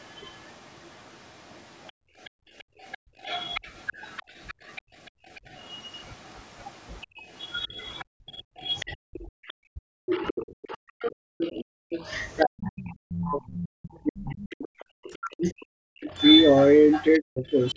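A second, fainter voice runs under the talker for the whole of the speech, sitting roughly 15 dB below it. This is the other side's voice leaking through: the far end is being played on a loudspeaker and most likely reaching the microphone, with the echo canceller leaving a residue it never fully removes. The band carrying both voices stops at 8 kHz, as the call's microphone processing would have it.

From 1.92 to 3.21 s the room sound falls away for about a second, dropping by about 39 dB before returning. This is background gated by the echo canceller: while the loudspeaker plays, the canceller clamps the microphone hard, taking the ambience with it. The same hole opens from 4.82 to 5.28 s (about 37 dB), from 8.05 to 8.6 s (about 40 dB) and briefly from 11.74 to 11.9 s (about 40 dB).

At 4.21 to 4.25 s the talker's own voice briefly ducks by around 25 dB, and again at 7.16 to 7.2 s by around 15 dB. 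From 8.91 s to the end, the voice repeatedly sinks and breaks up, losing as much as 40 dB over roughly seven seconds in total. This is likely speech suppressed in double talk. Both sides are speaking at once, and the canceller cannot tell the near talker from the loudspeaker echo, so it turns the near talker down too.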